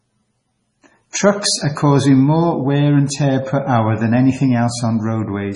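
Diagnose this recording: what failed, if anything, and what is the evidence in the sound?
Across the whole speech clip the sound is watery and swirly, with nothing above 10.5 kHz and heavy smearing. That is likely MP3 compression at the codec stage. The encoder is starving for bits, which fits a rate around 24 kbps, so it cuts the treble and lets weak frequency lines flicker between frames.

From 1.11 to 1.14 s a short hiss runs about 37 ms ahead of a sharp attack, which lands soft. This is pre-echo from the same codec. The quantisation noise sized for the loud onset spreads across its whole transform block and fills the quiet gap before it.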